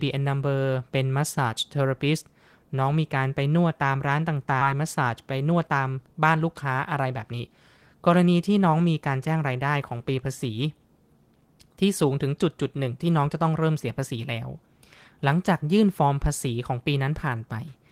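A speech recording with two faults. At 4.61 s a stretch of audio was dropped, producing a skip ahead: playback jumps forward by roughly a second with no fill, so the speech on either side is spliced almost directly and that portion is simply gone. Immediately after, from 4.71 to 7.78 s, a jitter buffer speed-up follows. The buffer was still holding more audio than its target, so the receiver repeatedly cut out short pitch-period-sized pieces, removing about a third of a second in total. The speech runs at roughly 108 percent of normal speed with its pitch unchanged, and sounds hurried until the buffer settles.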